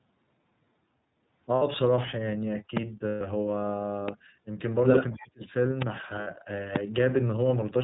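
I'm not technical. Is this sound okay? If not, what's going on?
No. Several separate problems can be heard in this speech.

Throughout, the voice sounds thin, a little rough and slightly robotic, like an old phone line. That comes from the iLBC codec, a compression method for internet calls that keeps nothing above 4 kHz. It rebuilds the voice in 30 ms chunks, each coded on its own, which leaves a plainly audible synthetic edge on every sound.

At 1.55 to 1.62 s, 3.08 to 3.21 s and 6.21 to 6.28 s the voice briefly turns into a held, buzzy, slightly breathy tone. These are lost iLBC frames. Pieces of the call went missing, 60 ms in the first and last cases and 120 ms in the middle one, and the decoder filled each gap by repeating the last bit of voice mixed with noise. Normal speech returns right away.

Sharp clicks jump out on top of the voice at 2.77 to 2.79 s, 4.08 to 4.11 s, 5.82 to 5.84 s and 6.76 to 6.78 s. 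Each is a single loud pop, most likely a sudden electrical spike from something like a plug, a switch, static or a driver hiccup. The voice carries on underneath each one.

From 5.12 to 5.42 s the voice suddenly drops away almost to nothing for about a third of a second. This is speech suppressed in double talk. The likely cause is that both people spoke at once, and the call's echo-removal system couldn't tell this speaker apart from the echo of the other person, so it turned the voice down until the overlap passed.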